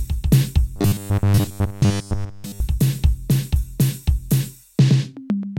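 Robotic sound from repeated short buffers runs from 0.76 s to 2.61 s of this music. The likely cause is new audio arriving too slowly, so playback keeps looping the most recent short slice while the real material is skipped; roughly seven tenths of that stretch is repeats. Each slice lasts about 10 ms, so the looping imposes a fixed 100 Hz buzz. The music turns hard and metallic, loosely tracing the original.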